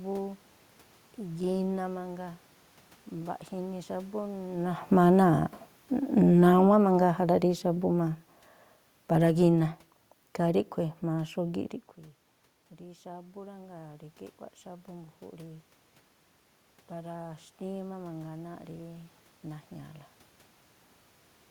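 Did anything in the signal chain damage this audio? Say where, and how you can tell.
Yes. The damage comes from call processing, specifically the automatic gain control. From 4.77 to 11.64 s there is automatic gain falling. Just before this, around 4.5 s, the talker moved. The gain control judged the input too loud, or its background noise too strong, and pulled its gain down by about 10 dB over several seconds. The tell is the room noise. It sinks along with the voice, so the whole signal was turned down, not the talker alone.

The opposite fault, automatic gain rising, follows twice. Around 11.5 s the talker moves away and the input drops by about 18 dB. From 12.77 to 15.74 s the gain climbs by about 4 dB to compensate. A second rise of about 3 dB runs from 16.92 to 20.0 s. Both are slow swells lasting roughly three seconds. The background noise swells with the voice each time, which marks them as gain changes in processing.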